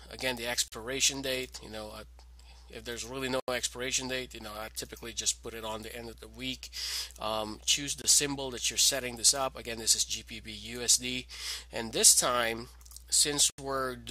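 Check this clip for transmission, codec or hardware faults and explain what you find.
There are four blocks of digital silence. They fall at 0.68 to 0.72 s (40 ms), 3.40 to 3.48 s (80 ms), 8.02 to 8.04 s (22 ms) and 13.50 to 13.58 s (80 ms). The audio cuts out with no fade and briefly vanishes as short holes.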